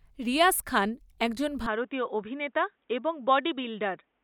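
At 1.66 s the speech abruptly narrows to nothing above 3.8 kHz, drops roughly 5 dB and gains a faint new noise floor, with no gap, continuing to the end. This points to a likely input switched to a poorer device.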